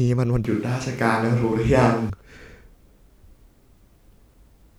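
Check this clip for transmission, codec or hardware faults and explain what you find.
One hardware-side fault is audible: a switch to a distant microphone. From 0.45 s to 2.10 s the speech suddenly turns roomy and hollow. It loses bass and drops by roughly 5 dB. Background noise rises to around 30 dB below the speech. At 2.10 s the close, full sound snaps back. The likely cause is that the close microphone's feed dropped out, leaving a farther pickup such as a camera microphone to carry the signal.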